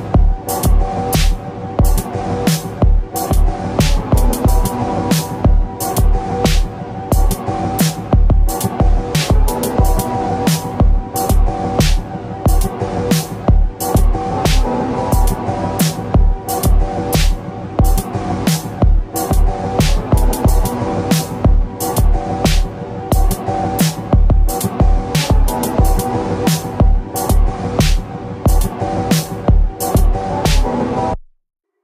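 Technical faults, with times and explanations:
No technical faults can be heard in this recording.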